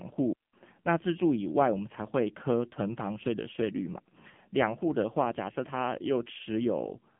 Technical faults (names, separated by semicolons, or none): AMR narrowband mobile codec; digital wireless dropout